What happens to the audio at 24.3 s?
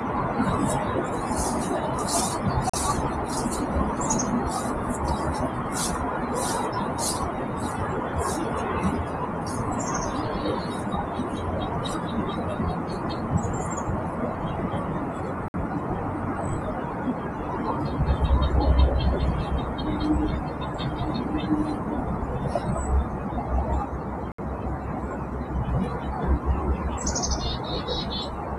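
A Bluetooth stall hits from 24.32 to 24.38 s. The audio drops to silence for about 66 ms, then carries on. The likely cause is interference delaying packets, so the headphones' buffer emptied and playback waited for the resent data to arrive.

Underneath, as everywhere in the clip, a noise suppressor applied to music or sounds is still active. It treats sustained tones and decaying tails as noise and pulls them down by roughly 5 dB, so held sound pumps and thins while attacks pass through.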